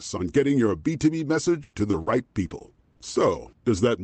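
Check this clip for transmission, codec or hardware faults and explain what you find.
One transmission fault stands out: repeated packet loss with a robotic sound, from 1.45 s to 3.79 s. The speech breaks up eight times over that stretch. The longest hole lasts about 100 ms. Each missing piece was patched by extending the sound just before it. In all, around a third of a second was rebuilt, about 11% of the span. The result is choppy, mechanical speech. The call codec's cut-off near 8 kHz is a normal trait of the path.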